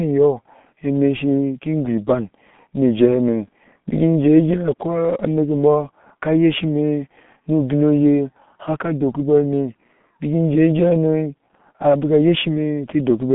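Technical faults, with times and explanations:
Throughout, G.723.1 codec: the speech passes through a slow-updating telephony coder whose sound points to about 6.3 kbit/s, limited to a 150 Hz to 3.5 kHz line band with nothing above 3.7 kHz. Heavy coding damage leaves it muffled and hoarse, consonants smeared.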